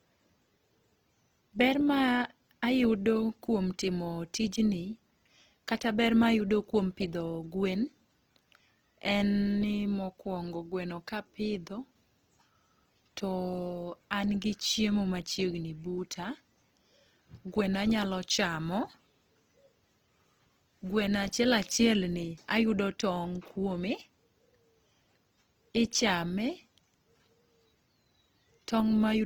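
Across the whole clip the speech carries plainly audible damage from what is likely Opus compression in its music-oriented CELT mode, at a rate that sounds close to 16 kbps. The band stays full, reaching about 20.4 kHz, because the encoder preserves each band's energy and fills starved bands with folded or noise content rather than leaving gaps. The result is a rough, grainy texture, with harmonic detail in the voice turning hissy and noisy instead of swirling.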